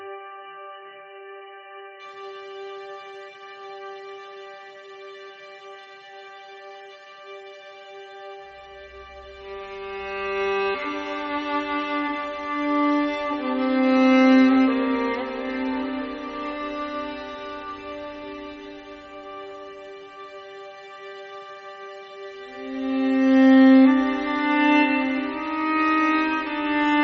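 Adaptive stream starting at a low bitrate, from 0 to 2.0 s: the player began on a very lean version of the stream, which fits a rate near 8 kbit/s, leaving nothing above 3 kHz and heavy codec smearing, then jumps abruptly, with no gap, to a 128 kbit/s version.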